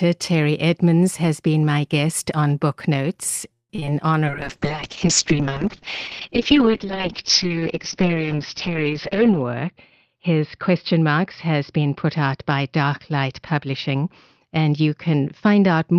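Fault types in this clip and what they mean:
Repeated packet loss (robotic sound): choppy speech from 3.53 to 3.9 s as four gaps, the longest 162 ms, were patched by stretching the previous sound.
Call bitrate drop: from 4.27 s onward the speech turns rough and muffled, as the encoder fell from 32 to 6 kbps and bandwidth narrowed to 6 kHz.
Jitter buffer speed-up: speech sounds hurried at unchanged pitch, 105% speed over 9.13 to 10.93 s and 112% near 14.5 s, as short pitch-period pieces were cut to shrink delay.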